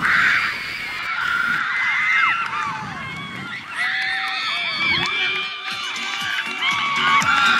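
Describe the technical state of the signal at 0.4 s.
At 0.4 s the signal carries computer activity noise, running from the start to about 2.45 s: a buzzy, chirping pulse train near 200 per second, roughly 20 dB under the sound. Processor or graphics load is disturbing the shared ground. Unlike steady mains hum, it shifts with computer activity.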